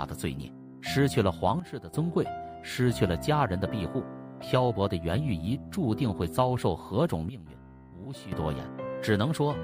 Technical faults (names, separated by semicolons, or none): sudden gain jump